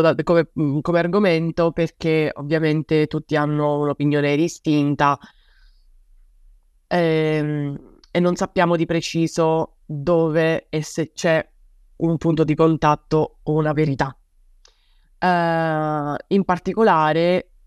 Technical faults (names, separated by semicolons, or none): none